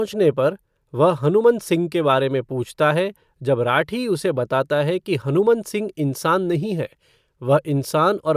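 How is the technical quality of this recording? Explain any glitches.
No glitches turn up anywhere in the recording. There is nothing here that needs explaining.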